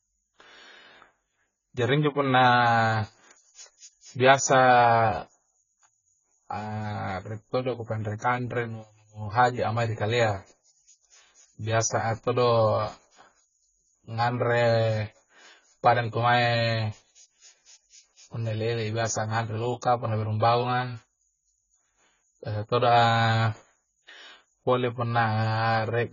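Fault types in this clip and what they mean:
AAC compression: The speech sounds dull and smeared throughout. Nothing is heard above 7 kHz. Sibilants and held sounds carry a fizzy, warbling texture. This heavy damage is likely from AAC-LC coding, and it fits a very low bitrate near 16 kbps.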